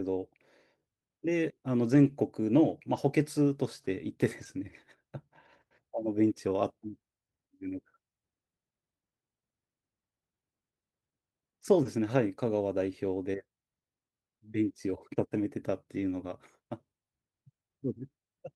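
At 1.83 to 2.13 s, 2.95 to 2.97 s, 4.39 to 4.45 s and 15.97 to 16.03 s, lost packets were rebuilt from error correction: a low-bitrate backup copy carried in the following packet was decoded instead. There is no gap, but the speech turns briefly rougher and noisier.

At 11.83 to 11.87 s, short concealed packet loss leaves about 20 ms with no copy at all. The decoder extends the preceding sound, which gives a brief smear or wobble rather than grainy roughness. Its second half, from 11.85 s, is again rebuilt from error correction.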